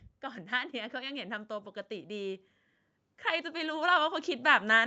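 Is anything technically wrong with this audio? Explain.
Yes. The speech shows automatic gain rising twice, from 0.49 to 2.49 s and again from 3.41 s to the end. In each case the automatic gain control judged the incoming level too low and pushed its gain up step by step, by about 4 dB over the first two seconds. Because the adjustment acts on everything at once, the voice and the background noise swell together, a slow upward drift in loudness rather than a jump. The call's microphone filtering and Opus path, with nothing above 8 kHz, are not faults.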